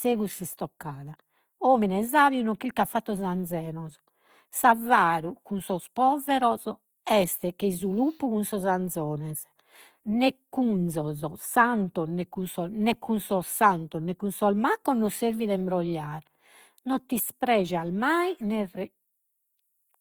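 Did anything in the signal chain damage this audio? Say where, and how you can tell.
Yes, at the codec: throughout, the speech sounds grainy and rough despite extending to 20.4 kHz, likely Opus compression, its noise-filled bands fitting about 24 kbps.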